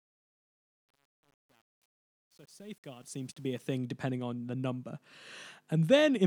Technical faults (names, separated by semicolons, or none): truncation distortion on a fade